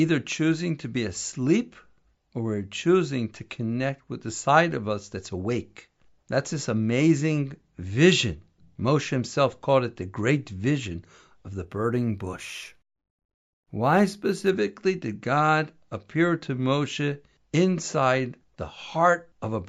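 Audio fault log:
11.65–14.49 s, imaging from linear upsampling: the top of the band dulls while faint mirrored copies of the speech spectrum appear between 8 kHz and 16 kHz, roughly 30 dB below the signal, which fits a 16 kHz to 48 kHz conversion done with straight-line interpolation. It sounds like a light metallic shimmer on sibilants. Unlike aliasing, the added tones mirror the real content upward and don't fold down into the lower band.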